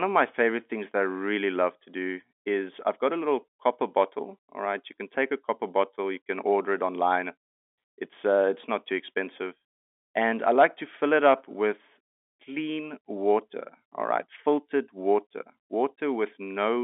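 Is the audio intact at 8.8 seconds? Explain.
Yes, the speech at 8.8 seconds is intact, with nothing heard there beyond the narrow telephone band of G.711 coding, which carries the sound between roughly 250 Hz and 3.6 kHz.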